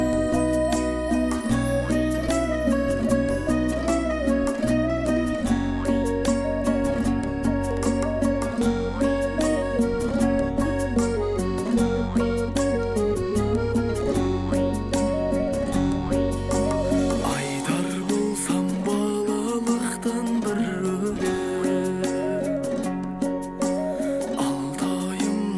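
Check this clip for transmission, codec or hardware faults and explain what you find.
Nothing here stands out as a transmission, codec or hardware problem, so there's nothing to flag in this one.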